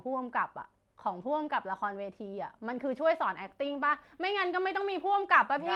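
At 1.21 to 1.23 s, and again from 3.89 to 3.99 s, a lost packet was rebuilt from error correction. Audio went missing in transit, and the Opus decoder filled the hole with the low-bitrate backup copy carried in the following packet. There is no dropout; instead those stretches turn briefly coarser and hissier. The first lasts about 20 ms, pointing to a single lost packet, and the second about 60 ms, which fits three separate lost packets, all within the 12 kHz-wide call audio.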